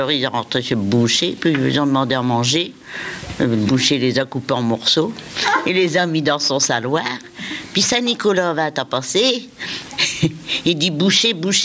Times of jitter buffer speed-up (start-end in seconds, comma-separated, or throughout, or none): none